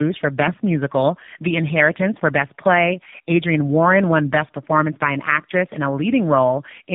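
Tandem speech coding runs through the whole clip. The speech passed through two low-rate speech coders in a row, with a plain telephone link between them. The sound fits a 6.7 kbit/s AMR-NB stage followed later by a 12.2 kbit/s one. The second coder worked on audio the first had already damaged, so the errors stacked. Nothing remains above 3.7 kHz. The result sounds muffled, rough and warbly, worse than a single coder would leave it.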